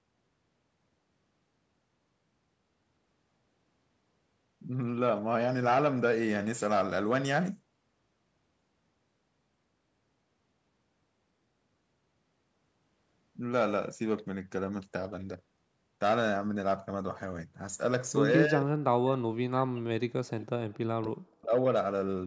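From 18.46 to 19.89 s the speech dips sharply and breaks up, falling by about 40 dB at its deepest before recovering. This is speech suppressed in double talk: both sides were likely talking at once, and the echo canceller, unable to separate this talker from loudspeaker echo, turned everything down.

At 20.74 to 20.78 s a brief, faint scrap of the voice returns 286 ms late, far quieter than the speech around it. This echo leak is likely a loudspeaker on one end whose echo canceller let some of the microphone pickup slip back into the call.

From 20.91 to 21.53 s the same suppression returns: the speech again sinks deeply, by about 40 dB at worst, and breaks apart while the other side is likely talking over it.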